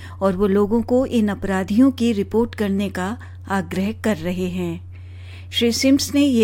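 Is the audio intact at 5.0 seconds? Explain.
Yes, the audio is intact at 5.0 seconds, with no dropout, click, distortion or other fault at that moment.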